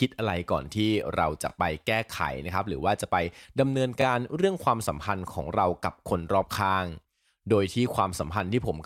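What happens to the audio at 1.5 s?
At 1.50 to 1.52 s there is a fault from overlapping chunks. The speech was handled in 2.5 s chunks, and each new chunk began before the previous one finished. So 20 ms of sound plays twice at the join. It is heard as a brief click or stutter.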